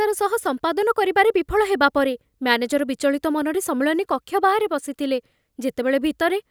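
Nothing in the audio stands out as a technical problem; the speech simply runs along without any glitch, dropout or other fault catching the ear.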